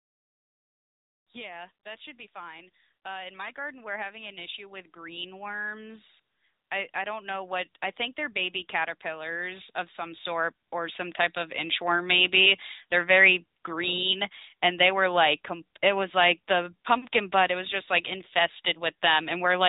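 Throughout the speech, the AMR narrowband mobile codec limits the band. Nothing passes above 3.8 kHz, and the voice has a buzzy, synthetic edge from the codec's vocal-tract model rebuilding each frame from a few pulses. The damage is plainly audible, which fits a bitrate around 10 kbps.

From 6.94 s to 12.36 s, automatic gain rising lifts the level by about 11 dB. The gain control judged the input too quiet and raised it gradually, so voice and background swell together over those five seconds.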